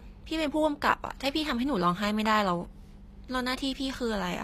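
All the way through, the speech has plainly audible codec damage with nothing above 14.9 kHz, and it's likely HE-AAC compression at something like 24 kbps. The treble is rebuilt from copied lower bands, so s sounds come out gritty and metallic rather than clean.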